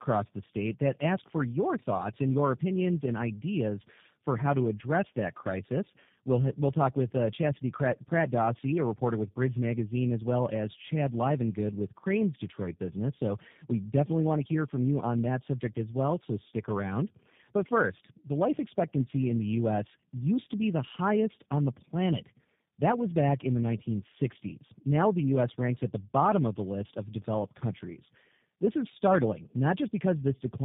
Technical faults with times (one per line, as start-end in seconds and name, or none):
0.00-30.65 tandem speech coding